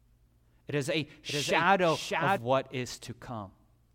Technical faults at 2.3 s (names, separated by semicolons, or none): doubled audio track